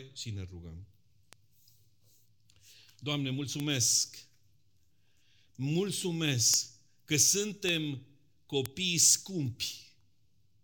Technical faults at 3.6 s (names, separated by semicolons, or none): bit error spike